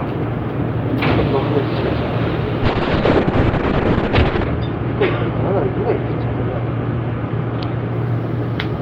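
From 2.64 s to 7.99 s, a call bitrate drop. The encoder was starved of bits, falling to about 6 kbps. Top end narrows to 8 kHz, and the sound turns rough and muffled.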